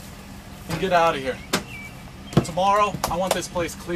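Periodic USB or driver dropouts run from 0.07 s to 3.87 s. A tiny gap of silence, far shorter than a millisecond, cuts the audio every 0.1 s, about forty times in all. Each gap is heard as a regular tick. Something is stalling the USB bus or audio driver on a fixed cycle.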